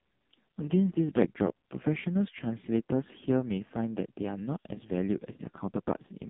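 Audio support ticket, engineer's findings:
Buzzy, synthetic, boxed-in speech for the whole clip. Nothing above 3.7 kHz, little below 150 Hz. Cause is the AMR narrowband mobile codec under heavy compression, which fits its lowest 4.75 kbps mode: 8 kHz sampling, voice rebuilt from a sparse pulse-driven vocal-tract model every 20 ms.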